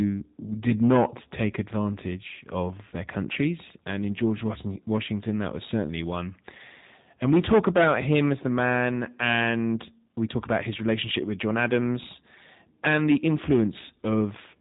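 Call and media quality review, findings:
G.729 codec damage, whole clip. Speech rough and synthetic, nothing above about 3.8 kHz. Probable component: VoIP codec, sound fits G.729A at 8 kbit/s. Speech rebuilt from filter, pitch predictor and sparse pulses. Unlike a plain band limit, which only muffles, the buzzy, reconstructed texture gives it away.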